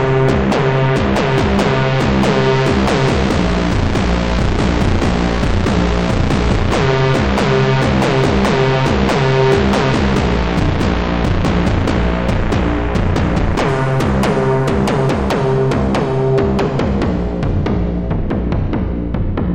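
Everyday sound, with channel delay (comb filtering) from the start to 13.69 s: one channel runs only a couple of samples late, and summing the pair to mono cancels their shared content at a fixed high frequency, first near 10 kHz. The top end sounds dull. A spectrogram would show a steady dark horizontal band around 10 kHz across that span, vanishing after 13.69 s, while the waveform shape barely changes.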